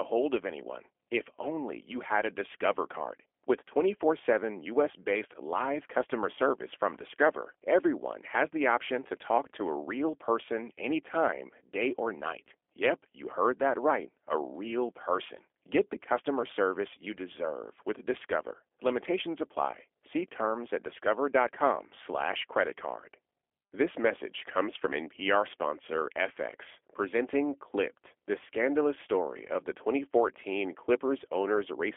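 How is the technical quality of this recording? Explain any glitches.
The technical quality is limited by plainly audible low-bitrate codec damage. Throughout the speech sounds slightly rough and synthetic, confined to roughly 300 Hz to 3.4 kHz with nothing above 3.6 kHz. This is G.729 codec coding, which fits 8 kbit/s: each frame is rebuilt from a vocal tract filter, a pitch predictor and a few pulses.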